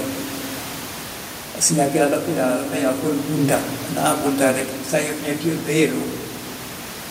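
Nothing technical goes wrong in this bit of speech; the only thing underneath is some ordinary room noise sitting about 16 dB below the voice, which is simply part of where it was recorded.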